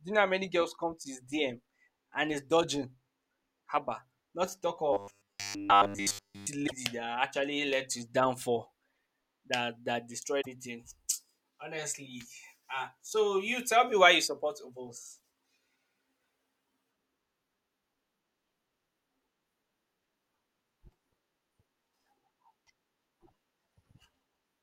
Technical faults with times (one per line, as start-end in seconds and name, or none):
4.93-6.47 robotic sound from repeated short buffers
6.66-6.72 broken MP3 bit reservoir
10.40-10.47 broken MP3 bit reservoir
15.18 broken MP3 bit reservoir